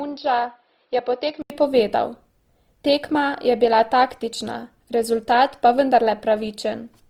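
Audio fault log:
throughout: Opus compression, likely at around 24 kbps in its music (CELT) mode, full band up to about 20.2 kHz. Thin bands get filled with folded or noise-like content, so tones sound grainy and rough; a spectrogram shows smeared, speckled texture rather than clean harmonics.
0.00–1.50 s: input switched to a poorer device, likely a different microphone or headset. Content stops above 5.1 kHz, level sits about 5 dB lower, and faint new noise sits far below the speech. The spectrogram shows a flat ceiling, then an 80 ms gap in the waveform at the switch.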